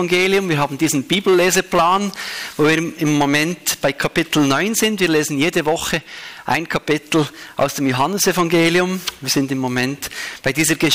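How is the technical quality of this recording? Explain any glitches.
Technical quality is poor because of one persistent fault. Hard clipping runs throughout: driven about 13 dB past the limit, roughly four percent of samples are flattened, giving harsh fuzz on every loud passage.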